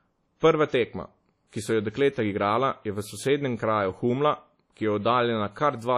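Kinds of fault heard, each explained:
WMA compression: likely from a low-bitrate codec near 32 kbps; speech rings and sounds washy, and the spectrogram shows smeared, patchy energy under a hard 13.3 kHz ceiling.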